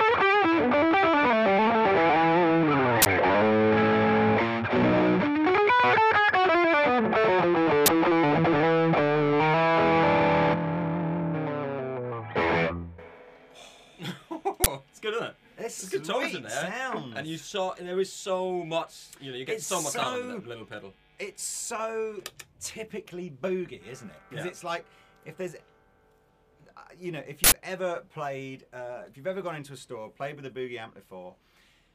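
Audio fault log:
3.02–3.06 s, 7.86–7.88 s, 14.64–14.66 s and 27.44–27.52 s, uninitialised buffer: four short, loud cracks and bursts of digital noise break into the sound. Each time, a block was sent to the output before any audio had been written into it, so whatever values were left in memory played as samples. The bursts last 40 ms, 20 ms, 20 ms and 80 ms, which suggests whole blocks of stale memory. That garbage has no relation to the surrounding audio, so it sounds abrupt and jarring.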